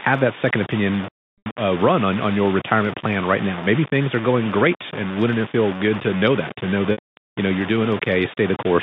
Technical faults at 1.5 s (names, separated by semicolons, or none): low bit depth without dither; packet loss with pitch repetition